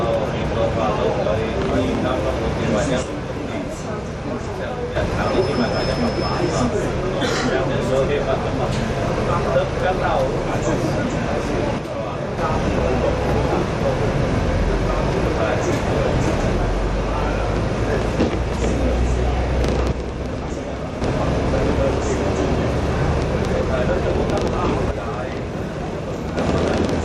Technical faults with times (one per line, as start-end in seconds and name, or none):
3.03-4.96 one channel drops out
11.78-12.38 one channel drops out
19.92-21.01 one channel drops out
24.91-26.37 one channel drops out